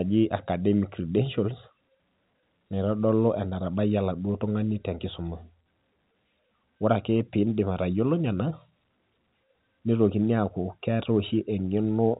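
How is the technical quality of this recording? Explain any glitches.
No glitches are audible, and the speech sits in the narrow band of G.711 A-law telephone coding, with nothing above 3.8 kHz.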